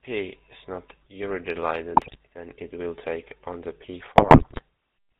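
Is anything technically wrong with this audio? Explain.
Yes. Throughout, the speech carries GSM full-rate codec damage. A pulse-excited vocal-tract model, consistent with 13 kbit/s coding, removes everything above 4 kHz and leaves a buzzy, gravelly roughness. GSM bit errors strike at 1.94–2.17 s, just before "then it will take", and again at 4.18–4.62 s. Corrupted filter, pitch and gain values distort frames into squawks, pops and gargling.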